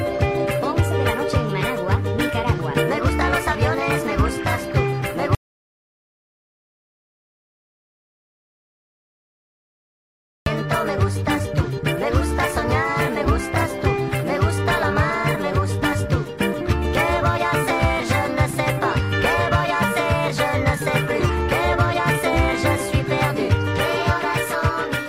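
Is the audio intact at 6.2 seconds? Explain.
No. At 6.2 seconds the clip sits inside an audio dropout to silence running from 5.35 to 10.46 seconds, about 5.1 seconds long. The input was likely lost while recording continued writing silence, so the sound cuts off abruptly, leaving complete silence with no room tone until it resumes mid-flow.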